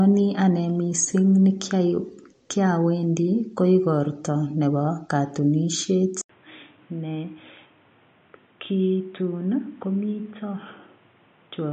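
From the start, the speech sounds watery and swirly, with nothing above 8.6 kHz. This is likely heavy MP3 compression at a low bitrate, near 40 kbps.

At 6.21 s the sound drops out for 80 ms, then returns dull, boxy, quieter, with faint new background noise. The likely cause is an input switched to a poorer device, passing nothing above 3.8 kHz.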